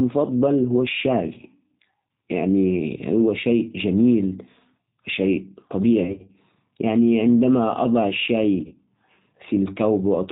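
From start to end the speech carries plainly audible G.729 codec damage. Nothing above 4 kHz survives, and the voice sounds slightly rough and synthetic because the 8 kbit/s coder rebuilds it from a vocal tract filter and a few pulses. That synthetic edge, not just dullness, separates it from simple low-pass filtering.

Between 6.04 and 6.36 s comes VoIP packet loss concealed by the speech codec. About 160 ms of audio goes missing in short scattered gaps, none longer than about 30 ms. The decoder fills each gap by extending its last pitch and filter at falling gain. A second loss of about 40 ms follows at 8.67 to 8.74 s. Both stretches are filled with fading extrapolated sound rather than silence, which marks them as concealment and not plain dropouts. The voice stays weak briefly afterwards.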